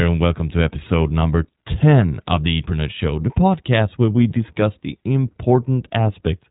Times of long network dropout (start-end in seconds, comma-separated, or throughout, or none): none